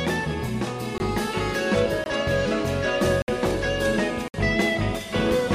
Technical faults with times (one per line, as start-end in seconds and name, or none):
0.98-1.00 block of digital silence
2.04-2.06 block of digital silence
3.22-3.28 block of digital silence
4.28-4.34 block of digital silence